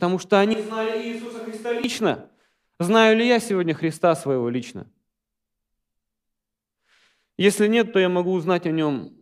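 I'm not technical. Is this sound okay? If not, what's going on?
No. From 0.54 to 1.84 seconds the speech suddenly turns hollow and roomy, loses its low, full body, drops noticeably in volume, and picks up more background room noise. At 1.84 seconds it snaps back to the close, clear sound. This is most likely a switch to a distant microphone: the close microphone's signal dropped out or wasn't used for that stretch, so the recording fell back on one farther away, which hears more of the room and less of the voice.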